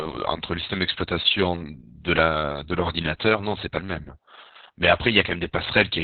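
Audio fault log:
Throughout, Opus voice compression: the whole thing has that heavy, squeezed quality. Everything above about 4 kHz is gone, so the speech sounds muffled and boxy, and the coarse excitation coding makes it hoarse and a bit robotic. That's the SILK linear-prediction coder in narrowband mode, starving for bits. The damage fits a very low rate, around 6 kbps, coded in long 60 ms frames.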